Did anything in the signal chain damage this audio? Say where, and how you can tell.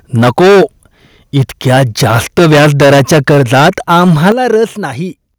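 Yes. The damage is microphone overload at the converter stage, from 0.16 to 0.64 s and again from 1.35 to 4.64 s. The input likely drove the converter about 13 dB and then about 14 dB past full scale. A large share of the first stretch and a smaller share of the second are clipped. On a waveform the peaks show as flat, squared-off tops. A spectrogram shows broadband vertical smears of added harmonics reaching well into the kHz range. They are heard as a harsh crackle on loud syllables.

The microphone volume is also stepped down, this time in call processing. The steps come at 0.24 s (about 2 dB), 3.31 s (about 2 dB), 4.32 s (about 10 dB) and 5.34 s (about 6 dB). The software likely lowered the device input gain after detecting the clipping. Each step appears on the waveform as an abrupt drop in the envelope. The spectrogram darkens across all frequencies at once, including the background, so it is a gain change and not a change in the source.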